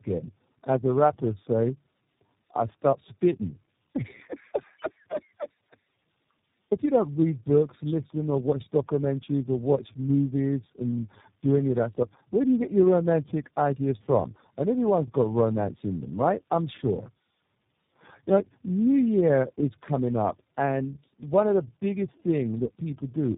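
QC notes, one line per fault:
Throughout, tandem speech coding: the speech sounds rough, muffled and warbly, more than a single phone codec would make it, and nothing comes through above 3.6 kHz. The sound points to about three low-rate speech coders in a row, something like G.729A twice and then iLBC, with plain A-law legs in between. Each hop decodes and re-encodes, so every coder models an already damaged signal, and the losses stack up.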